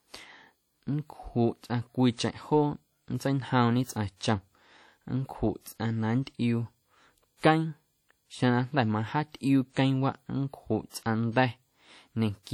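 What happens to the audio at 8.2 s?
At 8.2 s the speech has the same ringing, washy quality it has throughout the clip, with a hiss that swells and fades along with the voice. That's likely WMA compression at a low bitrate, where a long-block transform codec smears quantisation noise over tens of milliseconds and drops weaker detail.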